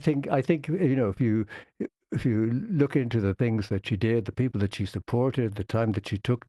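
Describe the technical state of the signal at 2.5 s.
At 2.5 s the speech is intact, with no dropout, glitch or other fault in the signal at that moment.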